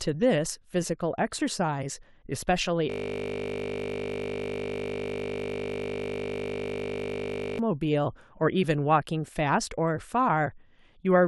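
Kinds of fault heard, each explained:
System hang loop: the playback side froze while the audio hardware kept replaying one 20 ms slice of its buffer, so from 2.9 to 7.59 s the speech is replaced by that fragment repeating about 230 times, heard as a steady 50 Hz buzz.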